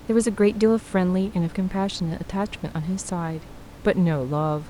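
No technical faults are audible.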